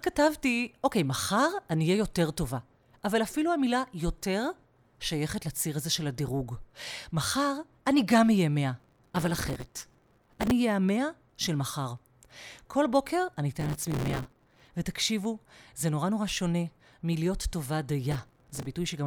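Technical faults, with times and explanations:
8.80–10.51 s, 13.60–14.71 s and 18.12–18.67 s, processor overload crackle: the processor repeatedly misses deadlines for audio buffers of only a few milliseconds. Each miss repeats a hard-edged scrap of stale audio, and these run together into gritty crackle over the speech until the load eases.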